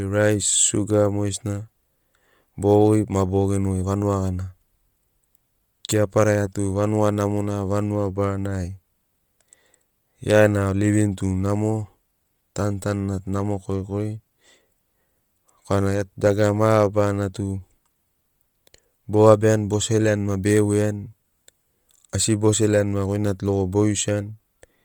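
Throughout, the speech carries a breathy, grainy, noise-filled top end, likely heavy Bluetooth LC3 compression, consistent with about 32 kbps and 10 ms frames.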